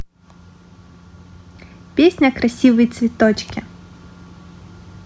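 No technical faults occur in the clip, so there are none to describe in time order.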